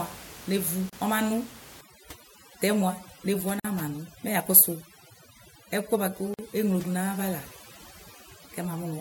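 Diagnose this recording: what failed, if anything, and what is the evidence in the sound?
Gaps at joins of encoded pieces, at the codec stage: brief silences of about 33 ms at 0.90 s, 48 ms at 3.60 s and 48 ms at 6.34 s. Separately encoded segments were spliced without trimming encoder delay and padding.

Overdone noise removal, at the call-processing stage, from 1.81 s to the end: the room noise, about 19 dB below speech, drops and breaks up into twinkling specks as bands are gated too aggressively.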